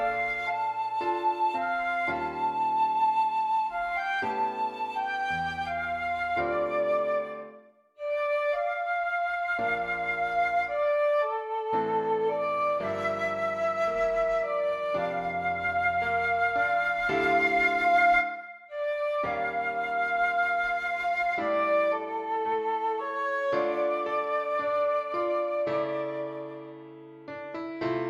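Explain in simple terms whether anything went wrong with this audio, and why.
Nothing went wrong with this audio that a listener can pick out. No moment stands out as broken, interrupted or distorted, so there is nothing here to explain.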